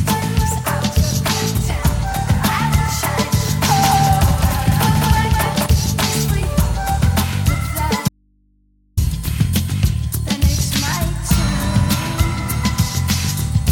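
A doubled audio track runs from 3.68 to 5.66 s. A second full-band copy trails the original by roughly 200 ms, at about the same level. It has no decay or room colour, and it starts and stops abruptly. A second capture path running late is the likely cause. From 8.09 to 8.97 s there is an audio dropout to a faint residue. The sound cuts out abruptly for 0.89 s. Only mains hum remains, around 40 dB below the signal. The likely cause is a lost input feeding a path that stayed live.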